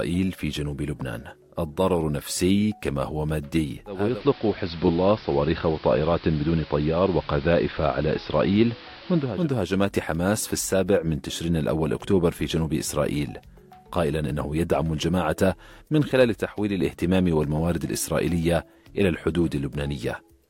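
At 3.85 s the digital radio blends to analogue, cross-fading over 396 ms to the AM broadcast until 9.52 s. The spectrogram shows a hiss floor roughly 20 dB down, and the waveform shifts level by about 1 dB.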